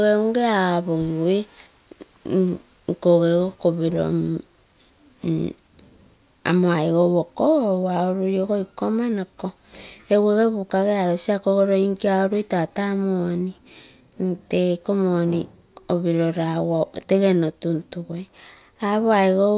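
No technical faults are audible.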